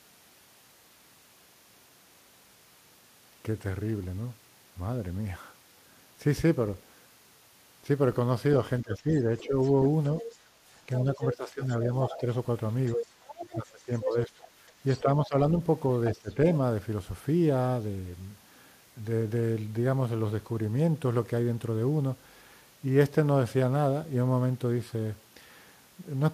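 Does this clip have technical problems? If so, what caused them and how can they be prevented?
Yes. From 8.82 to 16.3 s the speech is suppressed in double talk, dipping by as much as about 15 dB for roughly two seconds in total, likely because an echo canceller confused the talker with loudspeaker echo and attenuated both. Unlike a network dropout, these cuts coincide with the other side speaking. Tuning the echo canceller's double-talk detector prevents this.

From 8.94 to 15.28 s the other side's voice is leaking through at about 10 dB below the speech, likely residual loudspeaker echo the canceller failed to remove. It is a separate voice, not a delayed copy of the talker. Using a headset or better echo cancellation prevents it.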